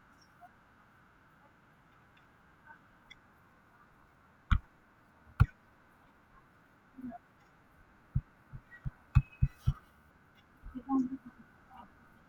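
A speech recording with CD scratch ticks from 8.63 to 10.17 s: eight brief ticks, each a few milliseconds, evenly spaced about five per second, one per disc rotation, unlike randomly timed vinyl or digital clicks.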